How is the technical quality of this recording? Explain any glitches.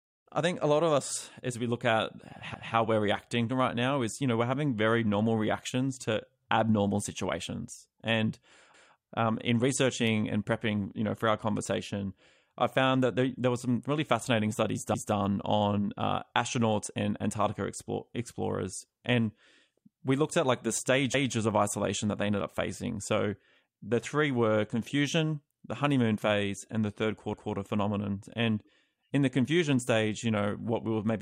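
The recording has one recurring glitch, overlapping chunks, at 2.54, 8.74, 14.94 and 21.14 s. The speech was handled in 6-second chunks, each restarting 200 ms early, so a fifth-second stutters twice. A waveform shows that short segment duplicated, and a spectrogram shows a small repeated block with a seam.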